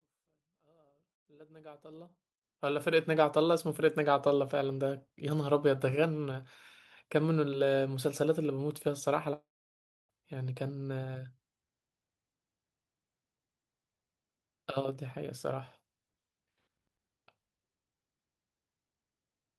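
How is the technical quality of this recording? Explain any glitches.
The recording has one clear glitch: a gap in the speech around the midpoint, after a gentle fade-in over the first 3.2 seconds or so that opens the clip without any click.

From 9.33 s to 10.11 s the speech breaks off. A brief buzzing or hissing tail carries the last sound forward and dies away, leaving about 0.64 s of near-silence before the speech resumes with about 0.76 s of it missing. This is likely a long network dropout: the audio stopped arriving, the receiver extended its last fragment until that wore thin, and playback picked up later without recovering what was lost.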